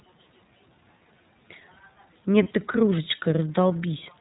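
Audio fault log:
throughout: iLBC codec. Everything is squeezed into narrowband, so nothing above 4 kHz gets through, and the speech has a plainly audible rough, slightly synthetic edge from the excitation coding. The thin, grainy character fits the 13.33 kbps mode with 30 ms frames.
2.43–2.48 s: lost iLBC frames. A single dropout about 30 ms long, which fits one lost 30 ms frame. The decoder fills it by repeating the last pitch cycle with some noise, so you hear a brief held, faintly buzzy vowel before the voice snaps straight back.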